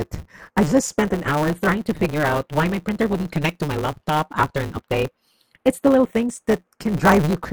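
Running from the start of the speech to its end, the two channels are drifting apart. They sit on clocks that disagree by a few tens of ppm, so the offset between them grows to a fraction of a millisecond. In mono this gives a slow flanging sweep, and a spectrogram shows comb notches gliding gradually across the frequency axis.

Also present throughout is a block size mismatch with truncation. The writing stage delivers longer blocks than the reader accepts, which fits 512-sample blocks, so each block's tail is discarded. The result is a 150 Hz buzz, with speech running 1.6 times fast at roughly normal pitch. The waveform shows regular splice discontinuities, and the spectrogram shows evenly spaced vertical lines.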